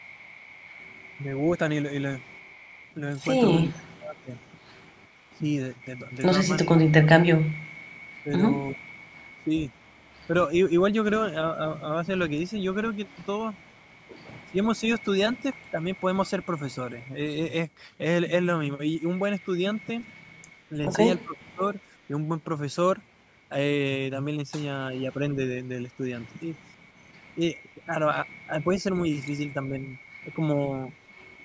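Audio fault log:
0.0–5.35 s, 8.14–10.26 s and 13.06–16.45 s, echo leak: a faint copy of the speech trails the original by about 0.35 s, the same delay each time. It sits about 30 dB below the speech in the first stretch and about 40 dB below in the later two. The likely cause is a loudspeaker on the far end whose echo canceller let part of the returning sound through. The fixed lag and the added copy distinguish it from the dips of double-talk suppression, which remove sound instead of adding it.
3.61–10.34 s, 14.47–16.01 s, 20.7–22.12 s and 24.91–30.39 s, speech suppressed in double talk: the speech level drops in pieces. The drops reach roughly 25 dB in the first and third spans, around 15 dB in the second, and only a few dB in the last. They add up to roughly 2 s, 0.3 s, 0.5 s and 0.7 s. This is likely an echo canceller that could not separate the talker from the loudspeaker echo and turned both down.
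26.66–26.83 s, background gated by the echo canceller: the room sound, not the speech, drops by about 8 dB for roughly a tenth of a second and then returns. The canceller clamped the microphone hard while the loudspeaker played and let go moments later. This is shorter than the speech ducking around it, and it affects the background alone. The band stops at 8 kHz with the lowest bass trimmed, which is the normal microphone processing of a call.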